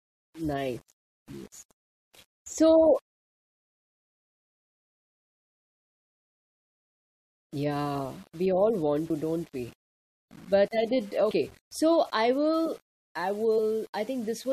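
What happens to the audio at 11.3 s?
At 11.30 s, compressed frames are skipped. About three 23.2 ms frames go missing, so roughly 70 ms of speech jumps ahead with a brief smeared blip.

Around that moment, the speech also carries grainy, signal-following distortion about 30 dB below the level. It likely comes from low bit depth without dither, rounded to 7 bits.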